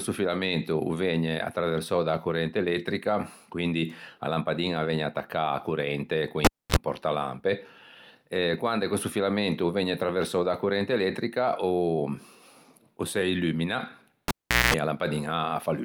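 Speech with a cable pulled and plugged in twice: after "corrente con" at 6.45 s, a pop, 0.27 s of near silence and a 40 ms 50 Hz buzz; before "e a" at 14.28 s, 0.41 s of silence and a 0.21 s 60 Hz buzz, then a pop.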